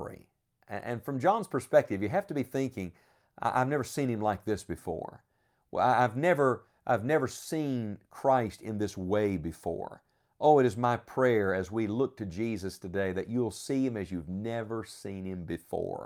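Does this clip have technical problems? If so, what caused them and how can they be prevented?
No, this clip has no technical problems, so there is nothing to cause or prevent.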